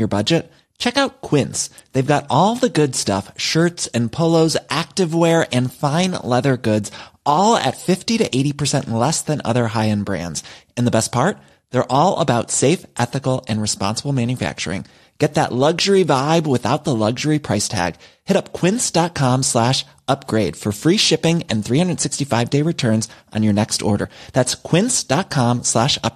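Compressed frames skipped at 24.04 s: about two whole frames of the coded speech never reach playback, so the audio jumps ahead by roughly 50 ms, which fits frames of about 26 ms. Overlapping neighbour frames blur the join into a short smeared blip, not a sharp click.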